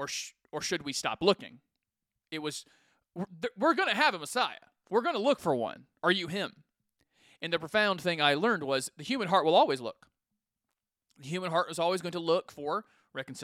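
A speech recording with nothing technically wrong to point to, and no moment where a fault can be heard.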